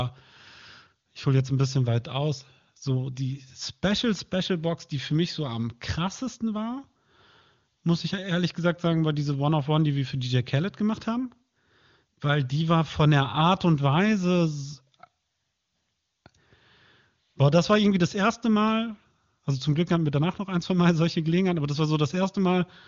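The speech contains no audible technical faults.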